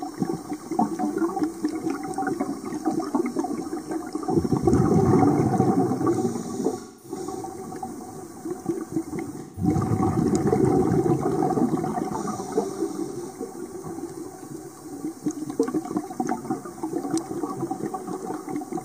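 The audio has three short dropouts from AAC frame loss with concealment, at 6.79–7.16 s, 9.39–9.68 s and 13.11–13.17 s, lasting about 0.21 s, 0.17 s and 0.04 s. Each length is a multiple of roughly 43 ms, which points to whole codec frames going missing. The decoder covers each gap by rebuilding from the last good spectrum, so the holes come out as smeared, noisy patches rather than clean silence.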